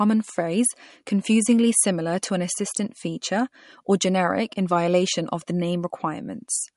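From start to finish, the speech carries plainly audible codec damage, likely from MP3 compression at a low bitrate near 48 kbps. Nothing sounds above 11.2 kHz. Weak frequency lines flicker between frames, giving a watery, swirly texture. S sounds turn metallic.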